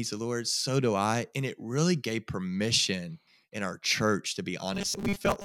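From 4.73 to 5.45 s the speech turns into robotic sound from repeated short buffers: a rigid 200 Hz metallic buzz, with roughly half the audio likely replaced by a repeated 5 ms chunk. The waveform shows identical 5 ms cycles, and the spectrogram shows fixed harmonic stripes spaced 200 Hz apart.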